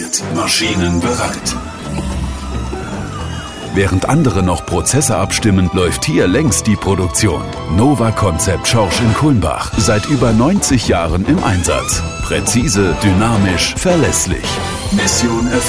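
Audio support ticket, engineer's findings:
No faults found on listening; no dropouts, clipping, noise or timing errors, nothing to trace to any component.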